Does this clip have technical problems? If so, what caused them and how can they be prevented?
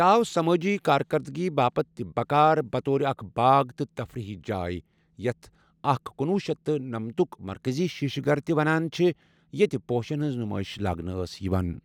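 No, there are no technical problems in this speech recording. With nothing gone wrong, there is no cause to trace and nothing that needs preventing.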